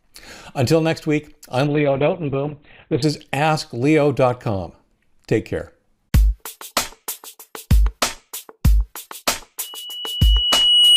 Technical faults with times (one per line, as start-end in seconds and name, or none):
1.67-3.08 call bitrate drop
9.63-10.96 loudspeaker feedback squeal